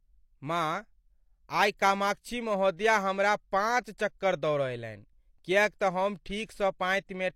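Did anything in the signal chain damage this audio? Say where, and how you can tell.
Yes. Pre-echo at 3.84 s, from the codec stage: a brief hiss of about 16 ms sits just ahead of a sharp attack, softening its onset. The transform codec spread quantisation noise across the whole block, so noise sized for the loud attack leaked into the quiet moment before it.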